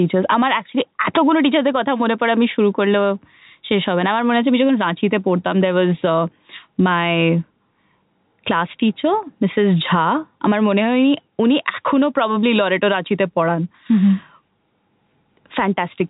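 No technical faults are audible.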